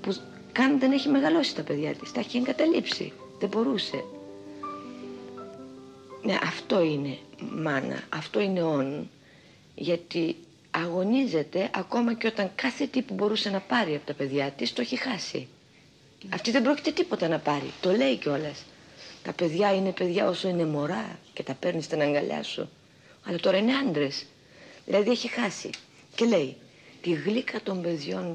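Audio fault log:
Nothing stood out on listening to this recording.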